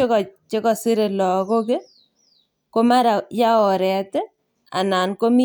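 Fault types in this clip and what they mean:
No faults detected in the speech recording across its full duration.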